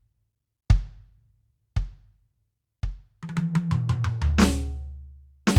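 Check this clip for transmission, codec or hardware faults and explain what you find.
Listening through this music clip turns up no faults. There is nothing further to report.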